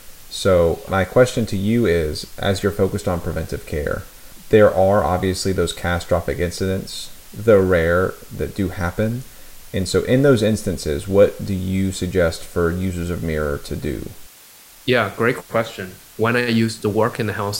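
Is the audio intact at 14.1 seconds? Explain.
No. At 14.1 s, as across the whole clip, the speech has been reduced to low bit depth with dither: the signal was rounded to very few levels, which fits a 7-bit signal, and dither noise was added before the rounding. That dither breaks the link between the rounding error and the speech, turning it into steady white noise rather than distortion. The result is a constant, even hiss sitting roughly 25 dB below the speech.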